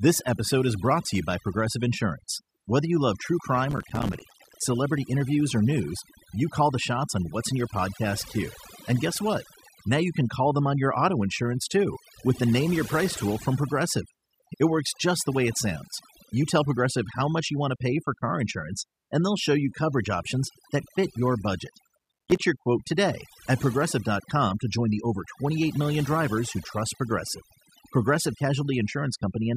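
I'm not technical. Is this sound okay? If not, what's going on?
No. There are two problems.

The first runs through the whole clip. It is overdone noise removal. A cleanup tool was set too strong. It cut away background noise and also quiet parts of the voice. So the pauses sound almost silent with twinkling specks.

The second is processor overload crackle. It happens twice. The computer could not keep up, so dozens of tiny slices of sound, each a few milliseconds long, came out as silence. Together they make a gritty crackle. The first burst runs from 3.71 to 4.65 s, after "you love true" and before "interviews or news you". The second runs from 21.99 to 22.37 s, after "that fit your budget" and before "your quote today at".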